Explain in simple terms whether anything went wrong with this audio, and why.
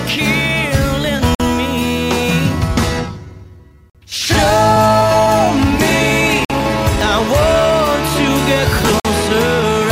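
The sound cuts out briefly and sharply four times, at 1.35, 3.90, 6.45 and 9.00 s, each hole lasting 50 ms. This is a gap between chunks: the audio came in 2.5 s pieces, and silence was inserted at each join.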